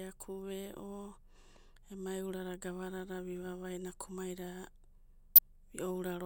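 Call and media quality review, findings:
Damaged data in a compressed stream, 1.54 to 1.57 s: short blip, about 30 ms, in the speech. Component: decoder input. Corrupted bytes in the coded stream; frames misread or rejected, sync lost until the next valid frame header.

Same fault, 5.35 to 5.39 s: second blip, about 34 ms. Same mechanism, with bad frame data breaking decoder sync before it locks onto the next header.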